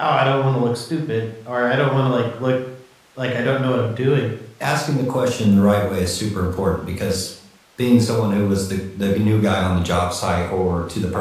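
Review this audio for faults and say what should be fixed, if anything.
Nothing in the audio needs to be fixed, because no faults can be heard.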